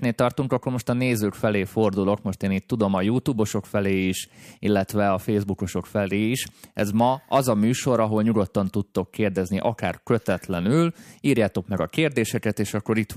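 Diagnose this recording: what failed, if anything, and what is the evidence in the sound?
Nothing failed here: listening across the whole of this speech recording, no stage of the chain leaves a mark worth diagnosing.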